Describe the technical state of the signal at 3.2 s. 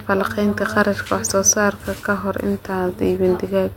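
At 3.2 s the signal is intact, with no audible fault at that moment.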